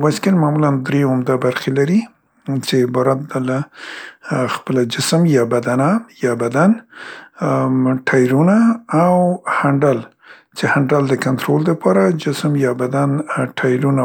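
Nothing technically wrong turns up anywhere in this bit of recorded speech, so there's no fault to point to.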